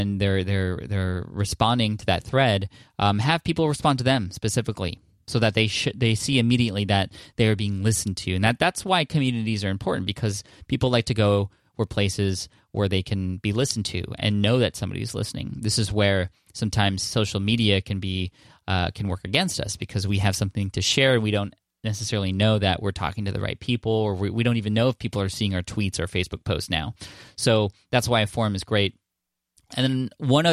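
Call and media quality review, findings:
No audible faults found.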